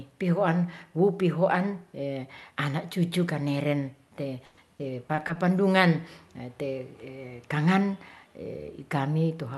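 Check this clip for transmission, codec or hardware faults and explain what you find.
One transmission fault is present: repeated packet loss (robotic sound) between 4.45 and 5.37 s in the speech. Over that stretch about six separate dropouts occur, the longest around 120 ms, adding up to roughly 220 ms of missing audio, about a quarter of the span. The receiver covers each hole by extending the preceding audio, and the next loss arrives before the signal recovers. The speech therefore turns choppy and robotic, with fragments absent.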